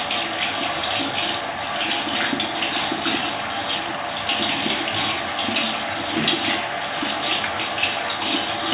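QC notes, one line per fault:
No technical faults are audible in the signal.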